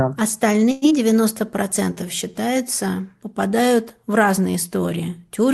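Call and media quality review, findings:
Call audio freeze, 0.71 to 0.85 s. Sound stalls and the last fragment carries on as a fading buzz or hiss for about 0.1 s. Then it resumes where it stopped, nothing lost. Likely cause: delayed packets draining the jitter buffer, with the receiver extending the last audio.

Skip ahead, 0.90 to 0.94 s. Playback jumps forward with almost no gap. Roughly 70 ms of audio missing, both sides spliced nearly directly. Audio dropped in transit or by the jitter buffer on overflow.

Jitter buffer slow-down, 1.37 to 2.33 s. Speech drawn out, running at 93% speed with pitch unchanged. About 77 ms added. Receiver repeating single pitch periods back to back to rebuild its reserve. Opus coding noise and a top end stopping near 12 kHz present throughout.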